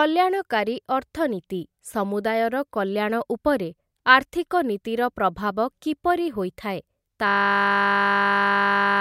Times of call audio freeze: none

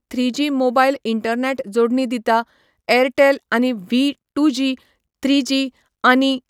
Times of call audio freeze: none

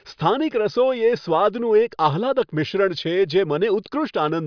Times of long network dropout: none

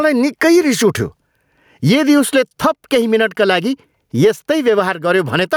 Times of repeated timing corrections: none

